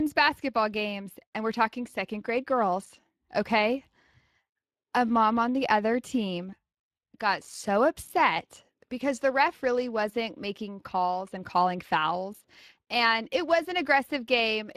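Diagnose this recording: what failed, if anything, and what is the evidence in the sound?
Speex codec damage is present throughout the speech, from start to finish. The stage is the codec. The voice has a plainly audible grainy, roughened texture, and the spectrum stops at about 15.4 kHz. Speex is a CELP coder. It models the vocal tract with a filter and spends its limited bits on coding the excitation that drives that filter. The excitation gets only a coarse approximation, which leaves this hoarse, noisy edge. The cut-off and the degree of damage fit a bitrate of around 22 kbps.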